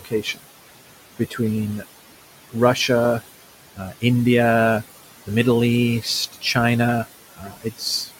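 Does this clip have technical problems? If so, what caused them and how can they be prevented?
Yes. Throughout the recording, the background pumps down between phrases and swells back under the speech. These are noise suppressor artifacts: the suppressor pulls each band it judges to be steady noise down by about 17 dB, frame by frame, against room noise sitting about 15 dB below the speech. A gentler suppression setting, or a quieter room and closer microphone so less reduction is needed, would prevent this.

Speech cut by the noise suppressor occurs at 0.00 to 0.45 s (dips of about 18 dB), 1.18 to 1.39 s (about 13 dB), 3.75 to 4.03 s (about 16 dB) and 7.35 to 7.81 s (about 17 dB). Within each span, brief stretches of the speech sound swallowed or faint, because the suppressor mistook those soft speech sounds for background and turned them down with it. Lowering the suppression strength or raising the speech-to-noise ratio at the microphone would keep quiet speech above the suppressor's noise estimate.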